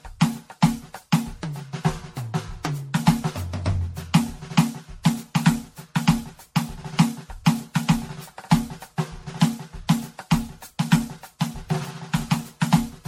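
Right from the start and all the way through, the music has that swirly, hollow, smeared quality of generation loss, likely from being run through MP3 at 64 kbit/s about seven times over. Attacks go soft, and nothing survives above 16.5 kHz.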